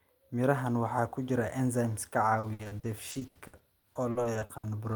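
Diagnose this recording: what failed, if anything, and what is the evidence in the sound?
Repeated packet loss (robotic sound) at the network stage, from 2.39 to 4.65 s. Nineteen gaps, the longest 80 ms, were patched by stretching the preceding sound, about 700 ms in all. That gives a choppy texture with pieces missing rather than the clean silent dropouts of a buffer underrun.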